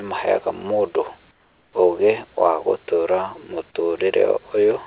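Speech over a narrowband call path, with nothing above 4 kHz, contains one pause where the sender has likely switched to discontinuous transmission and the receiver filled the gap with comfort noise in place of the background. From 1.31 to 1.73 s, about 0.42 s just before "ũgĩ wa", the real room ambience, sitting about 38 dB below the loud speech, gives way to a smooth, featureless hiss roughly 6 dB quieter. The natural background returns when the speech resumes.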